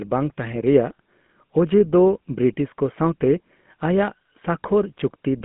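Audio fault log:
Throughout, GSM full-rate codec: the speech sits in a narrow telephone band from about 150 Hz to 3.4 kHz, with nothing above. The codec models the vocal tract as a filter and drives it with a sparse, regularly spaced pulse train rather than the real excitation, so voicing has a plainly audible buzzy, gravelly roughness. The coarse texture fits the early 13 kbps GSM full-rate scheme.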